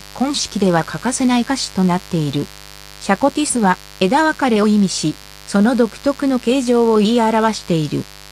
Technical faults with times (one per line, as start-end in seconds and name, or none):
0.00-8.32 mains buzz